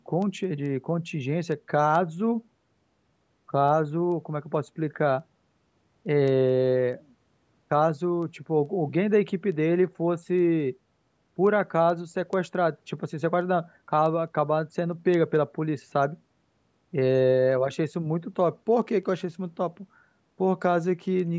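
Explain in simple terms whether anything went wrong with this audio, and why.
Something did go wrong: word clock ticks run through the speech from 0.22 s to 21.2 s, about a hundred sharp clicks of uneven strength arriving steadily every fifth of a second. Two digital devices were passing audio while running on separate clocks that disagreed by roughly a hundred parts per million, so a single sample kept getting dropped or doubled. Their clockwork regularity, rather than random timing, sets them apart from ordinary clicks or dropouts.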